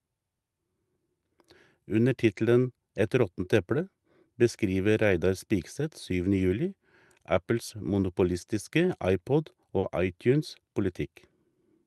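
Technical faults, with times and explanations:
9.79 to 9.85 s, short concealed packet loss: about 40 ms of the speech didn't reach the decoder in time, so the receiver filled the gap by extending the last bit of sound, carrying the pitch forward on voiced parts and using shaped noise on unvoiced ones, then crossfading back into the real audio. That produces the brief smeared wobble you hear there, heard through the call codec's top end, which stops around 12 kHz.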